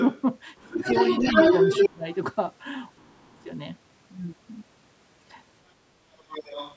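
From 0.00 to 0.22 s a second voice sits just under the speech, about 5 dB down. This is the other side's voice leaking through, likely loudspeaker echo the canceller failed to remove. From 0.56 to 1.89 s it grows louder than the talker, about 5 dB above.

Inside that stretch, from 0.59 to 0.74 s, the talker dips by about 15 dB. This is speech suppressed in double talk. Both sides overlap, so the canceller likely turns everything down.

A deeper dip, about 20 dB, follows from 1.88 to 2.08 s. A faint scrap of leaked voice, about 25 dB down, appears at 2.12 to 2.16 s.

From 2.98 to 3.49 s the talker drops hardest, roughly 30 dB, and nearly cuts out. A very faint leak sits at 3.40 to 3.47 s.

From 6.18 s to the end the other voice returns, about 10 dB below the speech.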